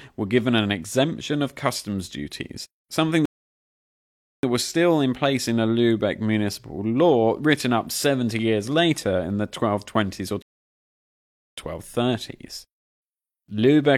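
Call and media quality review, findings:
Rebuffering stall at 3.25–4.43 s. Playback stops dead after "of customs duties something", silent about 1.18 s, resumes cleanly on "that was still in". Player buffer underrun. Download fell behind playback, output halted until data arrived. Second rebuffering stall at 10.42–11.57 s. Same symptom, about 1.15 s of silence, then clean resumption. No content lost at either point. Total delay added about 2.3 s.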